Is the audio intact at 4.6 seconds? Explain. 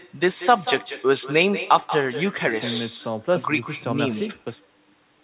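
No. At 4.6 seconds the speech carries an echo with no canceller, present across the whole clip. The far end plays the call through a loudspeaker. Its microphone picks that sound up, and nothing strips it out before it returns. So each phrase is shadowed about a fifth of a second later by a copy about 12 dB quieter. That copy sounds thinner, and like the rest of the call it has nothing above 4 kHz.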